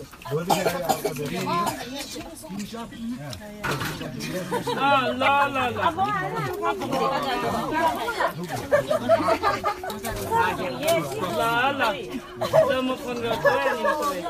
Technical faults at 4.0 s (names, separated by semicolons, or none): corrupt frame decoded